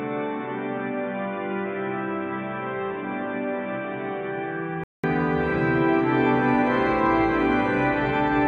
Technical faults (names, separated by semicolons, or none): input switched to a poorer device